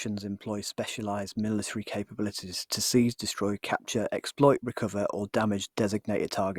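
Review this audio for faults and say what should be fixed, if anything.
No faults; nothing needs fixing.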